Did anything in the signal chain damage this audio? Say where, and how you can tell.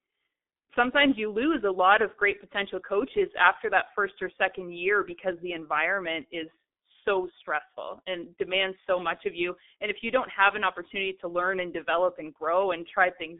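Yes, at the codec stage: the speech has been through a G.723.1 codec, and the damage is heavy throughout. Nothing reaches above about 3.8 kHz, and the band sits roughly between 300 Hz and 3.6 kHz, so the voice is muffled. A plain telephone-line filter would stop there, but here the voice is also hoarse and the consonants smear. That points to a vocoder running near 6 kbit/s, whose coarse 30 ms frames update the voice model too slowly to follow fast changes.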